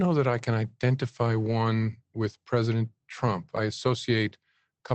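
Just after "that I can identify", from 1.43 to 1.53 s, and again from 3.87 to 3.89 s, the audio shows a lost packet rebuilt from error correction. The gap was covered by a low-bitrate copy carried in the next Opus packet (about 60 ms the first time, which fits three lost packets, and one 20 ms frame the second time), so nothing drops out. The audio turns briefly rough and noisy. A spectrogram shows smeared, grainier harmonics with a lifted noise floor, and the waveform stays continuous.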